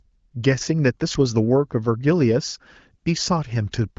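No technical faults can be heard in this speech clip. It has the band-limited sound of an AMR wideband (HD Voice) call, with nothing above about 7.5 kHz and at most faint coding roughness, which fits one of the higher rates such as 18.25 kbit/s.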